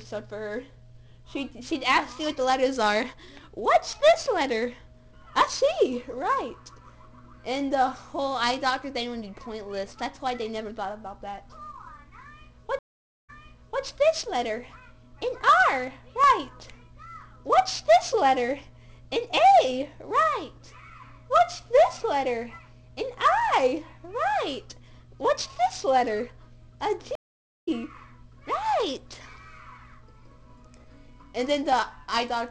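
At 12.79 s the audio drops out for about 0.47 s, a stream reconnect. After the connection broke, the player restarted its decoder and the server resent recent data, so playback resumes 0.58 s earlier and repeats a short stretch before running on to 13.83 s. A second stream reconnect at 27.15 s gives 0.49 s of silence, and this time the sound picks up roughly 0.3 s later, skipping material, before settling by 27.69 s.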